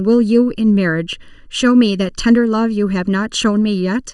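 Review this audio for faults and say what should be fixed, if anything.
Channel delay (comb filtering) runs throughout the speech. One channel arrives less than a millisecond late, and summing to mono cancels their shared content at evenly spaced frequencies. The first notch falls around 700 Hz, with more regularly spaced above it, giving a hollow, phasey tone. To prevent it, align the channels to the sample before the mono fold-down, or take only one channel.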